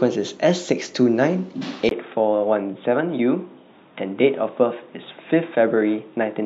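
At 1.89 s a gap of about 20 ms opens, and from there to the end the speech turns dull and boxy, with nothing above 3.8 kHz, a faint new background noise and no change in level. The input likely switched to a poorer device.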